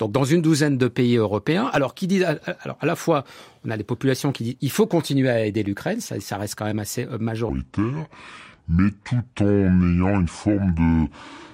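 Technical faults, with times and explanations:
7.49–11.54 s, section at the wrong speed: from 7.49 s the speech plays at 0.63 times its recorded speed, turning slow and deep, about seven semitones lower, likely from being played against the wrong clock. A spectrogram shows harmonics and formants shifted downward and stretched in time, and the waveform's cycles widen.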